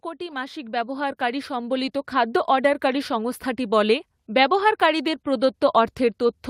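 From 0.17 to 3.47 s, speech and background swell together by about 11 dB before "বলে ব্যবহারকারীদের". This is automatic gain rising, steadily boosting an input it judged too quiet.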